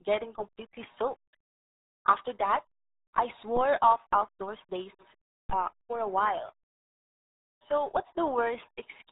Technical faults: RealAudio 14.4 codec; DC step

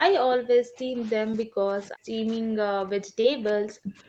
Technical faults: speech suppressed in double talk; short concealed packet loss

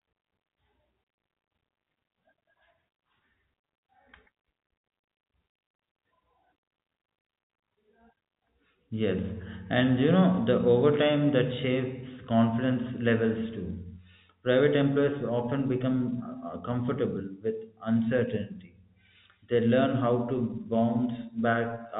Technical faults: none

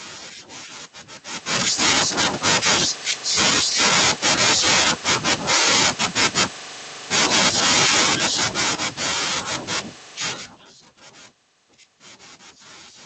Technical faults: automatic gain falling

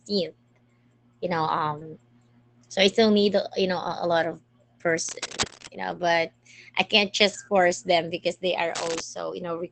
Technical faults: short concealed packet loss; lost packet rebuilt from error correction; cable scratch noise

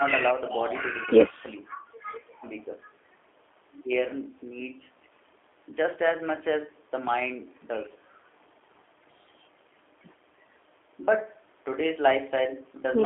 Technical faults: G.729 codec

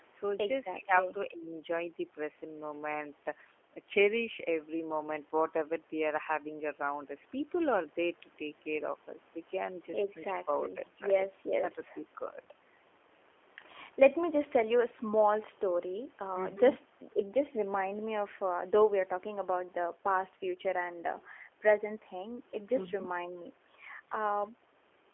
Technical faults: G.729 codec

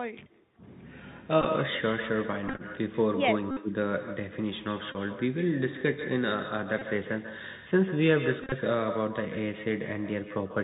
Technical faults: echo with no canceller; Bluetooth CVSD headset codec; Bluetooth headset packet repeated

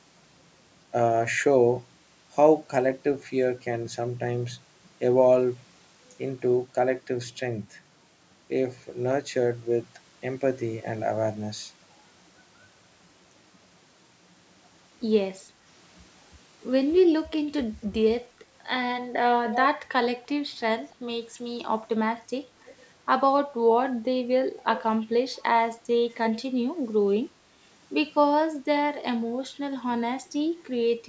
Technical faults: echo leak

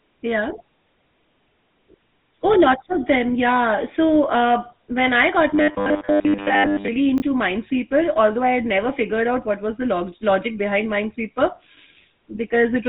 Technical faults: GSM full-rate codec; robotic sound from repeated short buffers; chunks out of order

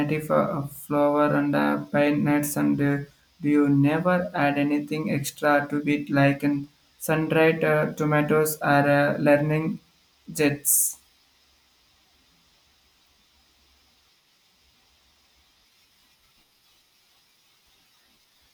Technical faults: none

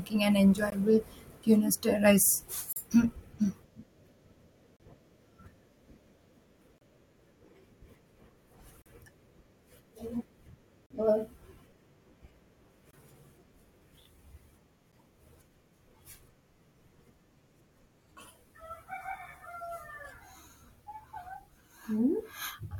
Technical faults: gap between stream segments

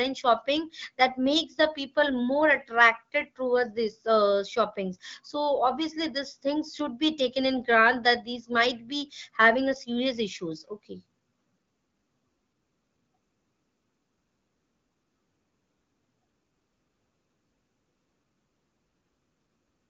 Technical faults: none

